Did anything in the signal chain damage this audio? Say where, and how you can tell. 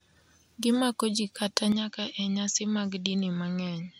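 Yes, at the capture stage. From 1.72 s, right after "jii kata", to the end, the speech loses everything above 7.6 kHz, drops a few decibels, and gains a faint new noise floor with no gap, likely an input switched to a poorer device.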